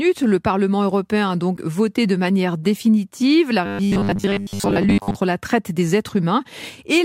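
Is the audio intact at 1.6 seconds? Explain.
No, there's a short glitch from 1.56 to 1.58 s where the audio jumps ahead with a chirp, a burst of noise or a brief hole. That's likely a broken MP3 bit reservoir: frames of roughly 26 ms each went missing, so the next frame decoded from someone else's borrowed bytes.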